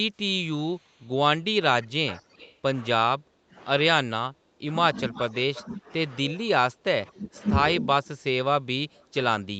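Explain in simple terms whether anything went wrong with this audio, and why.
Yes, two things went wrong. The first is an echo leak: the far side's echo canceller likely let some of its loudspeaker sound back into the call. You hear a copy of the talker trailing about 0.23 s behind, at 0.77 to 1.09 s, 1.61 to 2.57 s, 5.15 to 5.61 s and 7.27 to 7.42 s.

The second is speech suppressed in double talk: when both sides spoke at once, the echo canceller likely mistook the talker for echo and turned them down. The voice dips or drops out in pieces at 3.16 to 3.56 s, 4.04 to 5.89 s, 6.23 to 7.37 s, and from 7.79 s to the end.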